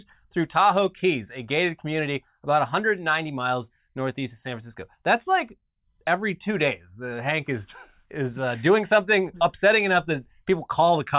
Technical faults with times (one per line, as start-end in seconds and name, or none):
none